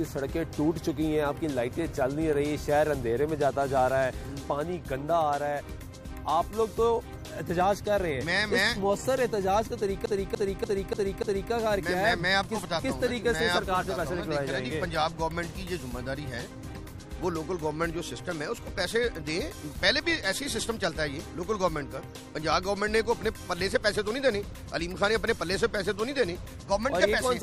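From 10.06 s to 11.52 s the sound sticks like a CD stuck on one turn: a scratch keeps throwing the laser back, so a 292 ms slice repeats five times, each pass cut by a brief mute. Unlike a digital buffer loop, the stutter is mechanically even and disc-like.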